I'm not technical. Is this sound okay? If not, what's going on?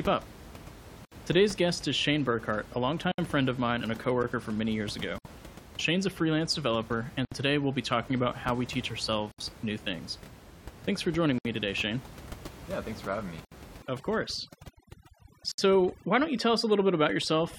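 No. There is a gap at a join of encoded pieces every 2 seconds, at 1.05, 3.12, 5.18, 7.25, 9.32, 11.38, 13.45 and 15.52 s. The audio was saved in separate chunks and stuck together untrimmed, so each seam leaves a gap of about 67 ms. You can hear it after "a freelance developer" and after "for joining".

There is overdone noise removal from 13.82 s to the end, starting after "thanks for having me". A cleanup tool set too strong cuts away quiet parts of the voice along with the room noise, leaving the background lower and broken into twinkling specks.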